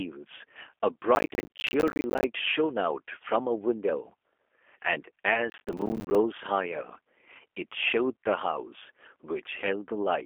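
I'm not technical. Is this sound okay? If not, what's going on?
No. The speech travelled through the G.729 codec, a phone-call compressor that rebuilds the voice from a rough model and cuts away the deep lows and crisp highs, so all ten seconds sound thin, boxy and plainly rough and synthetic.

Twice, the computer was too busy to deliver its tiny slices of sound on time and dropped many of them. This is processor overload crackle, and each dropped slice becomes a brief hole of silence. It sounds like gritty tearing from 1.15 to 2.24 seconds and again from 5.5 to 6.15 seconds.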